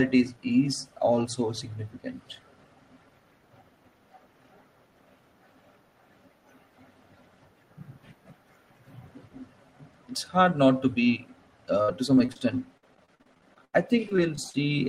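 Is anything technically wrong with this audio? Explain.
Yes. Near the end, right after "hard not to be", the speech turns choppy in three bursts, from 11.82 to 12.36 s, 12.77 to 13.74 s and 14.09 to 14.55 s. This is repeated packet loss (robotic sound). Audio kept going missing in quick succession, with gaps up to 82 ms, and each hole was patched by stretching the last fragment. The patched audio makes up roughly a fifth to a third of each burst.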